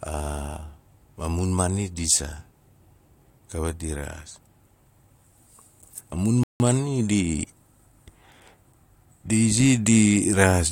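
At 6.43 s the speech halts in a rebuffering stall: the player ran dry of downloaded audio and waited, adding about 0.17 s of silence before "maani di". Unlike a dropout, nothing is missing; the sound picks up exactly where it stopped.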